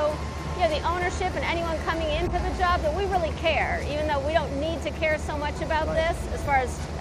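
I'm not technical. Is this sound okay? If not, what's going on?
No. There are three short bursts of corrupt frame decoded, at 2.26–2.32, 4.42–4.54 and 6.45–6.48 seconds. Damaged chunks of data were played anyway, producing brief chirps or noise bursts. It briefly turns into the wrong sound.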